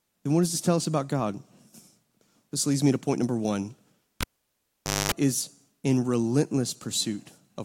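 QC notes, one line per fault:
4.21–5.12 s, cable pulled and plugged in: after "to point number one", a pop, 0.86 s near-flat waveform, 0.23 s of 50 Hz buzz as harmonic stripes, another pop before "is in".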